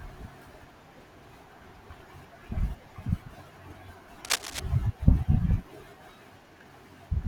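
A worn cable, connector or control likely shifted during this speech clip, its contact resistance jumping about and injecting cable scratch noise from 4.25 to 4.6 s: a dense, uneven burst of scratching and rustling that sits only a few dB below the speech.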